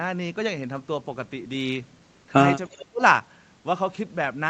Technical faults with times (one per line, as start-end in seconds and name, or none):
2.68-3.01 speech suppressed in double talk